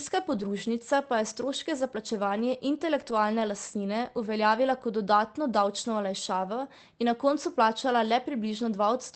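Lost packets rebuilt from error correction at 0.33–0.43 s and 3.01–3.11 s in this speech: missing audio was replaced by lower-quality redundant copies, so there is no gap, just briefly rougher, noisier sound.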